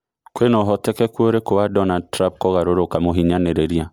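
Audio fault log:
throughout: generation loss, speech sounds swirly and smeared with blurred attacks beyond what one high-bitrate MP3 would give, likely from roughly three successive MP3 encodes.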